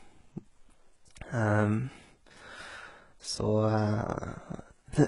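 Speech with HE-AAC compression throughout: treble is rebuilt, gritty and lispy on sibilants, and cut above 11.1 kHz, likely from a bitrate near 12 kbps.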